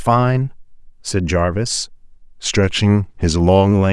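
A speech clip with one fault. From 2.10 s to 3.72 s the sound slows by 5.78 percent and drops in pitch by about a semitone, roughly 103 cents. Speed and pitch move together, then snap back to normal at the end. This is a drift correction step. The likely cause is clock-matching software that changed the playback rate in one jump to refill its buffer, rather than adjusting gradually.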